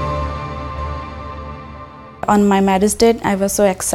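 From 0.78 s to 2.48 s, the audio carries a doubled audio track. A second full-band copy runs about 0.7 s behind the original. It sits a few decibels lower, around 5 dB down. It has no reverb tail or room colour, just a clean repeat. It cuts in and out abruptly at both ends. The likely cause is a second, slower capture path feeding the same signal into the mix.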